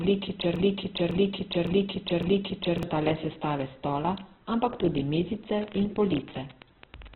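Throughout, the speech is grainy and rough, with nothing above 4.4 kHz. This points to Opus compression at a very low rate, around 8 kbps. The encoder likely dropped to narrowband and starved its bands, so it filled them with noise.

From 0.56 to 2.83 s, a fragment of about 0.56 s repeats back to back four times, just before "le sestave stola". This broken-record loop likely comes from a stalled stream resending its last fragment, and the audio meant for that span is lost.

From 5.59 to 7.15 s, a train of clicks ticks over the sound at an uneven pace of about 13 per second, about twenty pulses in all, some peaking roughly 5 dB above the speech. Interference or a faulty connection is the likely source.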